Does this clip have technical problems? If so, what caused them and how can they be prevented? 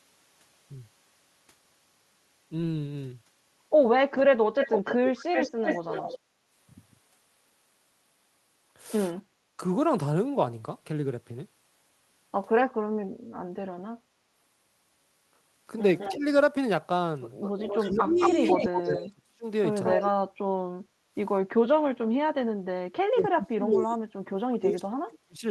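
Yes. There are three kinds of fault, all tied to echo cancellation on a speakerphone-style call.

Echo leak: From 4.59 to 6.19 s a delayed copy of the voice follows it by 273 ms, and from 15.98 to 20.11 s by 208 ms. In both spans it sits only about 5 dB below the direct speech. This is likely the far end's loudspeaker output reaching its microphone and slipping past an echo canceller that had not fully converged, so the residual was sent back. Prevention: use a headset or lower the loudspeaker volume, and give the canceller a clean reference and enough filter length to cover these delays.

Background gated by the echo canceller: The room sound dips from 6.2 to 6.43 s, by up to about 6 dB for roughly 200 ms, right after the first echo burst. It dips again from 20.75 to 21.14 s, by up to about 12 dB for roughly 400 ms. The canceller's suppressor pulled the microphone down while it judged the loudspeaker active, then released it. 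Prevention: use gentler residual-echo suppression with comfort noise so the background stays steady.

Speech suppressed in double talk: The talker's level drops when both sides speak. It falls by around 20 dB for about 70 ms at 9.49 to 9.61 s and by around 5 dB for about 150 ms at 16.1 to 16.24 s. From 17.78 to 25.44 s the drops are much deeper, about 35 dB, and add up to around 4 seconds. The canceller likely could not tell near speech from echo and attenuated both. Prevention: use a canceller with robust double-talk detection and full-duplex tuning rather than hard half-duplex suppression.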